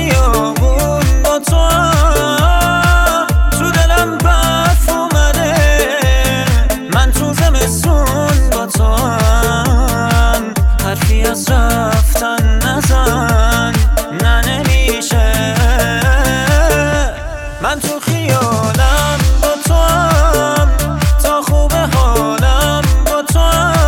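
Nothing goes wrong anywhere in this audio, so there's nothing to point out here.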